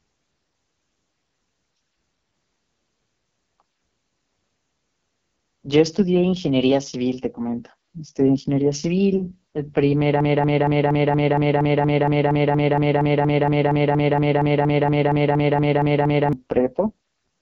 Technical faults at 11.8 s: AMR wideband (HD Voice) codec; broken-record loop

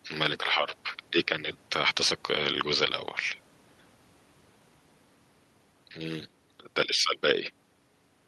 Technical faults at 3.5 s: none

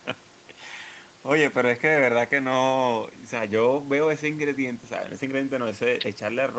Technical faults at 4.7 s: none

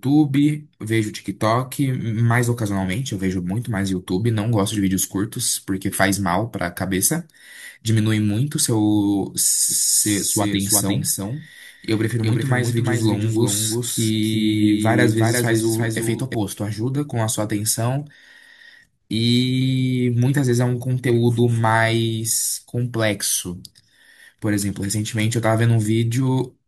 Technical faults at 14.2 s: doubled audio track

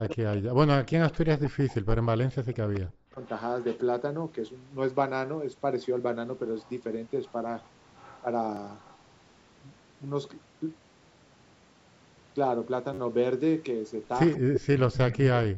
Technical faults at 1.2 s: speech suppressed in double talk; echo leak

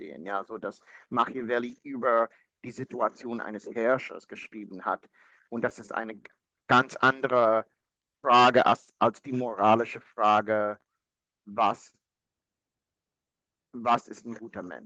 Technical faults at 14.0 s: clock drift between sender and receiver; repeated timing corrections

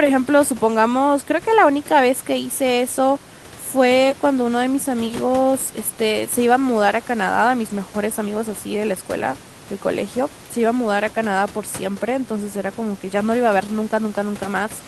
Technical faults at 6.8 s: none

